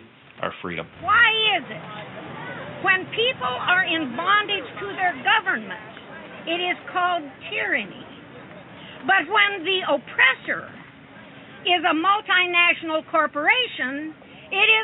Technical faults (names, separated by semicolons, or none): none